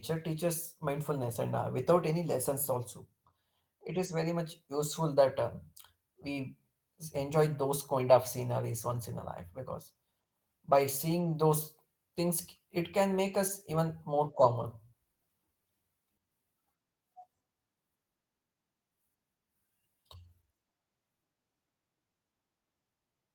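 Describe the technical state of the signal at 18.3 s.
At 18.3 s the speech signal is intact, with no audible dropout, clipping, distortion or other technical fault.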